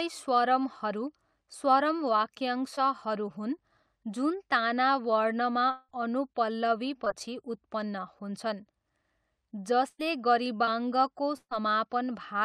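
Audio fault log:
2.75–2.79 s and 7.05–7.08 s: short concealed packet loss. In each case about 20 ms of speech failed to reach the decoder in time. The receiver bridged the hole with roughly 15 ms and 13 ms of synthesised continuation, extending the preceding sound from its pitch or as shaped noise, then crossfading back into real audio. The result is a brief smear or wobble rather than a gap, and a very short consonant in that window may be lost.
5.71–5.91 s: long network dropout. For close to 0.2 s the preceding sound is stretched into a buzz or hiss that fades without ever reaching silence. The concealment fills about 178 ms, and roughly 180 ms of speech never plays. Speech then picks up further along, with that stretch absent. The likely cause is a network stall in which no packets arrived for that period, leaving the receiver to extrapolate from the last audio it held.
9.88–10.01 s and 11.37–11.53 s: burst of packet loss. 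Several consecutive packets were lost or arrived too late, removing about 100 ms and 140 ms of speech. The receiver continued the last sound for about 109 ms and 137 ms, turning it down as each gap went on, so voiced sound becomes a held buzz and unvoiced sound a fading hiss. About 10 ms and 50 ms of silence follow before speech resumes further on.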